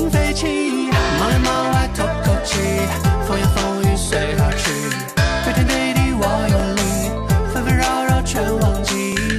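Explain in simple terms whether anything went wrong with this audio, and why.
Two things went wrong.

Throughout, the sound is dull and muffled, with a gurgling, grainy roughness laid over it, as if the top end keeps flickering in and out. This is most likely MP2 compression squeezed too hard. The format divides the sound into narrow frequency bands and shares out a limited data budget among them. When the budget runs short, the higher bands get dropped and the rest are stored crudely, which takes away the brightness and adds that granular texture.

There are also four brief stutters or clicks, at 1.56–1.58 s, 4.08–4.10 s, 6.60–6.62 s and 9.12–9.15 s. They come every 2.5 seconds, and each replays a sliver of about 21 ms. This fault is called overlapping chunks. The audio was handled in 2.5-second blocks, and each block began slightly before the previous one finished, so a tiny piece plays twice at every join.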